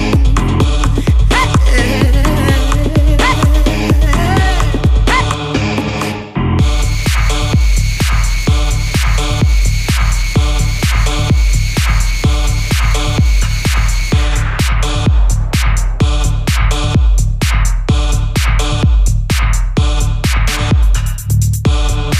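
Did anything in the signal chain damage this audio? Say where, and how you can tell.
No, nothing in the signal chain damaged this audio.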